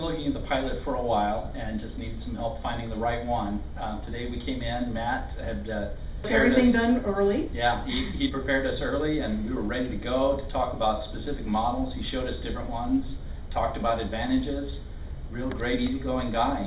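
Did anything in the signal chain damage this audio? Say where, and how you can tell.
Yes. At the network and jitter-buffer stage, a skip ahead occurs between 6.24 and 6.26 s. About a second of audio never reached playback, either lost in transit or discarded when the buffer overflowed with later packets already queued. Nothing fills the hole. The sound before the jump is spliced almost directly onto material from roughly a second later, so the listener hears an abrupt discontinuity rather than a silence or a smoothed concealment.

The same jitter buffer then performs a speed-up from 6.64 to 9.63 s. After the skip, it still held more delay than its target, so it repeatedly trimmed short segments of one or a few pitch periods, removing roughly a third of a second in total. Playback runs at 110 percent speed with pitch unchanged, so this stretch sounds rushed and any steady rhythm tightens. 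The G.711 mu-law call path, with nothing above 4 kHz, carries both faults.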